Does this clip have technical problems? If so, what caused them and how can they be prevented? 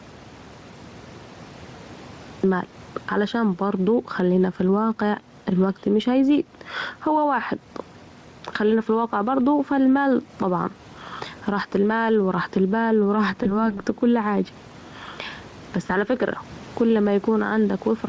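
Yes. There are three kinds of problem.

Gain pumping runs through the whole clip. The level swings by about 10 dB. Loud and soft parts sit close together, and the sound feels squashed. The likely cause is input gain set far too high, with a fast limiter or compressor clamping down on every peak. To prevent it, lower the microphone gain and use gentler, slower dynamics processing.

An audio dropout to silence is already under way when the clip begins. It lasts until about 2.44 s. That stretch is silent, with no room tone at all, and then the sound starts mid-flow. This likely comes from the input being lost, through a disconnected device, a broken link or a stray mute, while the recorder kept writing silence. To prevent it, secure the cable or connection and check mute states before recording.

VoIP packet loss concealed by the speech codec appears twice. The first runs from 13.43 to 13.75 s, between "رحت البال و راحت" and "كل حاجه". 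The second runs from 15.87 to 15.91 s, just before "على فكره كل". Each gap fits a single lost 20 ms frame. The Speex decoder filled it by stretching the last sound out and fading it. The voice then stays weak or distorted as following frames rebuild. To prevent it, use a more stable network connection or a jitter buffer with forward error correction.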